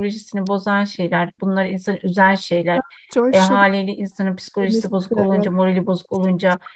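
At 0.47 s a single sharp snap sits on top of the speech. This is an electrical switching spike, likely from a nearby switch, motor or static discharge arcing briefly and being picked up on the audio line. It lasts only a few milliseconds and has no connection to the speech itself, so it is heard as an isolated click laid over the signal.

From 2.44 s to 3.11 s the speech is pushed down, at its deepest by around 40 dB. This is speech suppressed in double talk. Likely both ends talked at once, and the echo canceller could not separate the local talker from the loudspeaker echo and attenuated everything. The speech dips.

Inside that stretch, from 2.87 s to 2.91 s, a brief echo leak appears. A faint, delayed copy of the speech comes back 289 ms late, some 30 dB below the direct signal. The far end's canceller, likely on a speakerphone, failed to remove all of its own microphone pickup, and that residue was returned. 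It is heard as a short ghost of earlier sound.

The same double-talk suppression returns three more times. It runs from 3.64 s to 4.10 s, briefly from 4.50 s to 4.67 s, and from 4.86 s to the end of the clip. Each time the speech again drops by roughly 40 dB.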